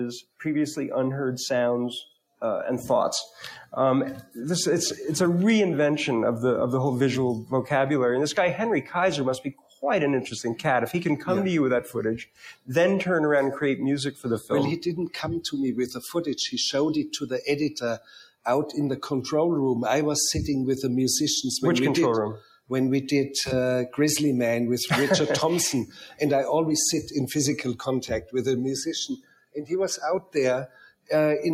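A noise suppressor applied to music or sounds runs throughout, treating steady tones and tails as noise, so the level pumps by a few decibels and thins.

Sound cut by the noise suppressor occurs at 9.47–9.83 s, 11.86–12.69 s, 14.12–14.51 s, 17.98–18.46 s, 22.39–22.71 s, 25.86–26.20 s and 29.15–31.10 s. Held or decaying sound sinks by up to about 18 dB, and about 12 to 14 dB at 14.1 and 25.9 s.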